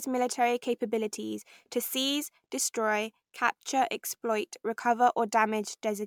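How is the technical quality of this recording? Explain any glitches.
The speech is compromised by one fault running through the whole clip: generation loss. Throughout, the sound is swirly, hollow and smeared, with softened consonant attacks and nothing above 19.9 kHz. This is likely from repeated lossy encoding, about five MP3 passes at what sounds like roughly 135 kbit/s, each requantising on a shifted frame grid so the errors accumulate. A single encode at that rate would sound far cleaner, so the swirl points to stacked passes rather than a low bitrate.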